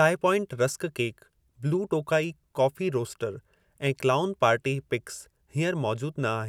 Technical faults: none

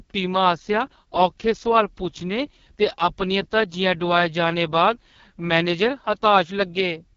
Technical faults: AMR wideband (HD Voice) codec

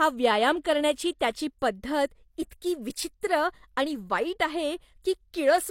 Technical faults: pre-echo

